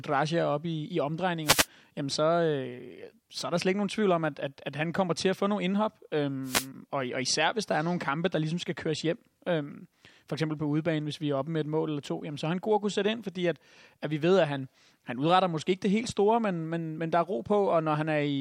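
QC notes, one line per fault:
1.44–1.67 s, wireless microphone noise hit: A brief swish of static cuts across the speech just before "jamen så". The FM radio link fades as reflected signals cancel. Receiver hiss rises.
6.43–6.68 s, wireless microphone noise hit: A second static burst of similar length, between "få nogle indhop øh" and "og og især hvis". It is the same fade-driven noise rise from the radio receiver.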